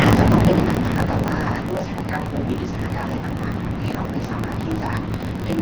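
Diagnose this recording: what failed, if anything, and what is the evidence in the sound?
Block size mismatch (truncated), in the driver or buffer stage: a steady 46.9 Hz buzz throughout, with speech running 1.12 times fast at normal pitch. This fits 1024-sample reads that drop each block's tail. A sample-rate error would shift pitch too.

Automatic gain falling, in call processing: from 0.04 to 1.84 s the speech sinks by about 11 dB. The background sinks with it, unlike a talker simply getting quieter.

AMR wideband (HD Voice) codec, heavily damaged: rough, raspy speech throughout, which points to its 6.6 kbit/s lowest mode. The roughness is continuous rather than broken into gaps, unlike packet loss. Its high band stops at 7 kHz, as expected from the codec.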